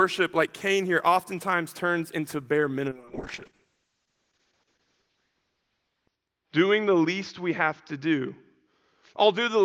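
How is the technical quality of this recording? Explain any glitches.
The quality drops partway through. A call bitrate drop starts at 2.9 s and lasts to the end: the encoder's budget falls from 32 to 6 kbps, holding its lowest for about 3.3 s. Coarser coding makes the speech rough and watery, and the audio bandwidth shrinks from 20 kHz to 6 kHz, muffling it. On a spectrogram, energy above 6 kHz vanishes, leaving a flat ceiling.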